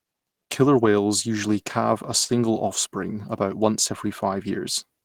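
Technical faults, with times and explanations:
2.24–2.31 s, short stall from a late packet: the jitter buffer ran dry, so the receiver stretched the current sound for about 42 ms with a faint buzz or dip, then resumed exactly where it paused. Nothing is skipped, unlike packet loss, and everything afterwards arrives 42 ms later.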